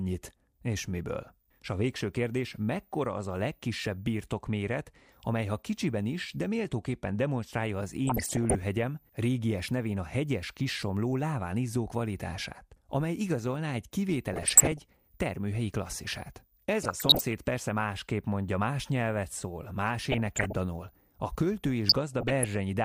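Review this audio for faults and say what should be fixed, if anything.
Switching supply whistle, present throughout: a faint high whistle sits under the speech the whole time, wandering between about 13.9 and 16.2 kHz around a centre near 15 kHz, at about 40 dB below the programme. A switching power supply in the chain is running in an audible burst mode or beating against another supply. Better filtering or a supply whose switching frequency stays well above hearing would remove it.

DAB burbling, at 8.07–8.55 s, 14.33–14.79 s, 16.83–17.33 s (just before "persze másképp mondja más"), 20.12–20.55 s (right after "más nyelvet szól más") and 21.87–22.45 s (after "a költő"): each burst is half a second of burbling over the speech. Weak reception let bit errors slip past error correction into the MP2 data, so corrupted samples put short blips of noise in single sub-bands and corrupted scale factors make sub-bands jump in level for up to a frame. 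The bursts last roughly twenty frames each, and the errors were heaviest at 8.07 s and lightest toward the end. A better antenna or stronger multiplex signal would prevent it.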